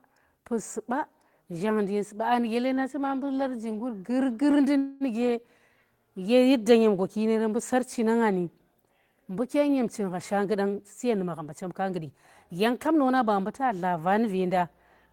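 A speech recording with three network-timing faults. First, a short stall from a late packet at 4.51 to 4.57 s: one packet missed its slot, the jitter buffer emptied, and the receiver held the last sound for about 21 ms until it arrived. The sound is briefly sustained, and nothing is lost. A call audio freeze follows at 4.78 to 5.04 s, likely from packets held up in transit that drained the buffer again. Here the receiver extended the last sound for 230 ms without it ever dropping to silence, and the speech then resumes where it stopped, adding a gap with nothing missing. Finally, a jitter buffer speed-up runs from 10.39 to 13.19 s: the buffer had built up more audio than it targets, so the receiver trimmed many tiny pitch-period slices, roughly 200 ms in total. The speech plays about 7% faster at unchanged pitch and sounds hurried.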